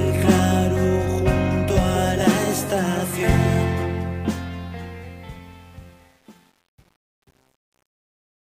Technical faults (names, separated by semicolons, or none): truncation distortion on a fade